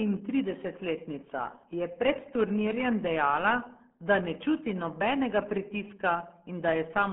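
RealAudio 14.4 codec damage runs throughout this speech clip, from the first second to the last. The sound is confined to a narrow band of roughly 200 Hz to 3.4 kHz, with nothing at all above 4 kHz, so consonants lose their edge and the voice turns muffled. Heavy gargling and smeared texture come from a very low-rate speech coder squeezing the signal into a tiny budget, which fits a dial-up-era rate near 8 kbit/s.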